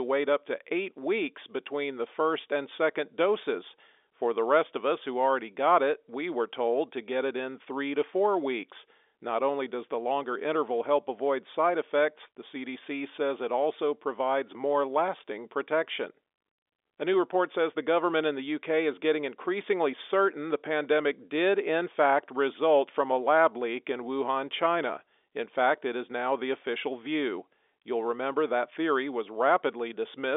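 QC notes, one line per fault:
Nothing to flag on this speech clip; it just has the narrow telephone sound of G.711 coding, with the line band running from about 300 Hz to 3.6 kHz and nothing above 3.8 kHz.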